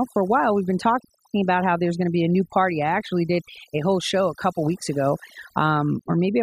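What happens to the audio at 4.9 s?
Overdone noise removal at 4.9 s, as throughout the clip: heavy suppression mutes bands near the noise estimate, leaving twinkling specks in near-silence.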